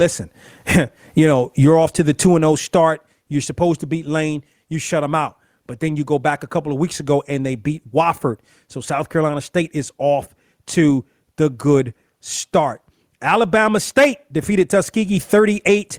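Gain pumping runs through the whole clip, with the level swinging by around 15 dB. The likely cause is input gain set far too high, with a fast limiter clamping down on every peak and squashing the speech.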